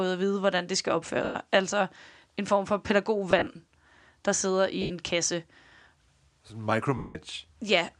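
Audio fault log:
1.24–1.35 s, lost LE Audio frames: just after "vide hvordan det skal", the speech smears into a noisy hiss for 110 ms and then fades. The LC3 decoder was replaying the last spectrum with random signs, which fits about eleven 10 ms frames going missing.
3.31–3.47 s, lost LE Audio frames: after "en form for", brief noisy patches are scattered over 160 ms, the longest around 40 ms. These are short concealment fills where frames dropped intermittently, 90 ms in total.
4.82–4.90 s, lost LE Audio frames: after "der sidder", an 80 ms gap is filled with a hissy smear. The decoder is again repeating the last spectrum with scrambled signs.
6.97–7.15 s, lost LE Audio frames: a 180 ms smear starts noisy and dies away gradually. This loss ran long enough for the concealment to fade the repeated spectrum toward silence.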